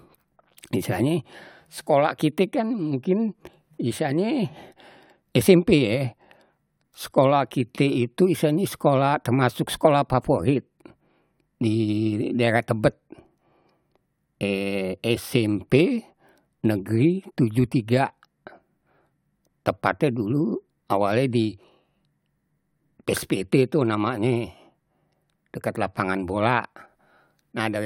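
Nothing in the signal of this speech recording points to a technical fault at any point.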